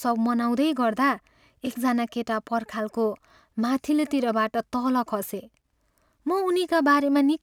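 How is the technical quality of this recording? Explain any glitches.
The recording carries a steady fault from start to finish: sample clock jitter. The converter's clock wobbles by roughly a couple of microseconds, so each sample is grabbed a touch early or late. The error scales with how fast the waveform is moving, which is why you hear a grainy hiss riding on the louder, brighter parts of the speech, sitting about 40 dB below the signal, and dropping away in the pauses.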